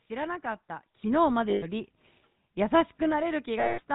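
Throughout, the speech carries the buzzy, gravelly roughness of the GSM full-rate codec, consistent with its 13 kbps mode. The vocal tract is modelled and driven by sparse pulses, so a spectrogram shows nothing above 4 kHz and coarse, smeared harmonics.

At 1.02 s the microphone volume is stepped up. The input gain jumps by about 7 dB in a single step, and voice and background noise get louder together. A waveform shows a sudden rise in the envelope, with the noise floor rising too.

From 1.5 to 1.66 s, lost GSM frames leave a 120 ms gap, which fits about six frames. The last good frame's settings are repeated, so the sound is held as a rough, metallic ring. A spectrogram shows frozen, repeating bands.

From 3.6 to 3.81 s, a longer run of lost GSM frames lasts 180 ms, which fits about nine frames. The held metallic ring hangs on through the gap before speech resumes.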